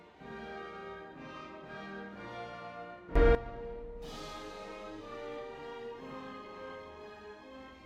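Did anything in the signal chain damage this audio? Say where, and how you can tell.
Yes. There is a sudden gain jump in the music between 3.16 and 3.35 s. The level rises by about 15 dB from one sample to the next, and it drops back by the same step at 3.35 s. The music and its background noise floor move up together. So the change happened in the digital path, after the noise was already in the signal. The likely cause is a gain setting or bit shift in the driver or buffer stage, applied with no ramp.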